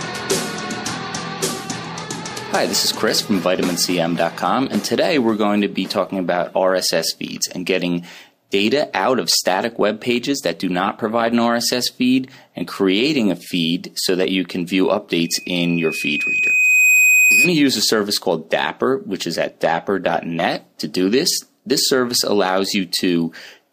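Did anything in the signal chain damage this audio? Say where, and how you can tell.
Yes. At 5.58 s there is a single sharp tick, broadband and unrelated to the surrounding sound, peaking at about -21 dBFS. It is a bit error spike: one flipped bit on a digital link or in storage jumped one sample by a power of two.

From 15.24 s to 17.55 s a pure 2.5 kHz tone swells over roughly a second and a half to about 5 dB above the audio. This is loudspeaker feedback squeal at the playback stage: the microphone re-captured its own speaker, and loop gain exceeded one at that frequency.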